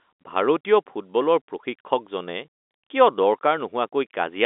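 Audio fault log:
No faults heard in this telephone-band speech recording.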